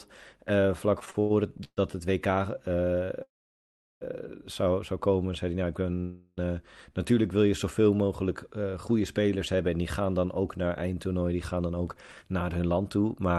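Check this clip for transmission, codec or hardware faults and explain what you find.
There are three kinds of transmission fault in this speech clip: a stutter, two freezes and a speed-up at the end. The audio also carries the usual coding noise, and its top end stops near 12 kHz, which fits an Opus call codec.

Repeated stalls (stutter) run from 0.99 to 1.93 s, just after "eh vlak". Packets arrived late, and the jitter buffer ran dry six times. Each time, the receiver stretched the last sound to bridge the hole. The longest gap is 129 ms. Concealment fills about 37% of that span. Nothing is lost, but the speech drags and stammers.

A call audio freeze occurs from 3.22 to 4.03 s. The sound holds, then fades, and about 720 ms of the 786 ms gap is silence. The speech then resumes where it stopped. A second freeze runs from 6.00 to 6.39 s, just before "natuurlijk wil je zoveel". It lasts 370 ms and is filled throughout by a fading continuation, with no silence. 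Both are likely caused by packets held up in transit, which emptied the jitter buffer. Each adds delay equal to its length.

A jitter buffer speed-up runs from 11.60 to 13.35 s. The buffer had built up too much audio. To shrink the delay, the receiver cut out many short pitch-period slices, about a fifth of a second in total. The speech plays at roughly 113% speed. Pitch stays the same, so it just sounds hurried.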